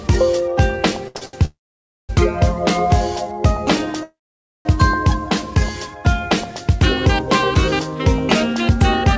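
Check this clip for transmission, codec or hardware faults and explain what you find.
Two kinds of transmission fault appear, the short stalls clustered early, with the band-limited sound of a wideband call codec (nothing above 8 kHz, which fits G.722 at 64 kbps) throughout.

Short stalls from late packets occur at 1.08 to 1.17 s, 1.17 to 1.23 s and 1.25 to 1.35 s. Each time a packet arrived late, the jitter buffer emptied and the receiver stretched the last sound for 71 ms, 44 ms and 77 ms. Nothing is lost, but the sound drags with a faint buzz or dip.

Call audio freezes occur at 1.45 to 2.11 s and 4.03 to 4.67 s, lasting about 0.64 s and 0.62 s. The likely cause is packets held up in transit, draining the jitter buffer. The last sound continues briefly as a fading buzz or hiss, then roughly half a second of silence follows before the audio resumes where it stopped.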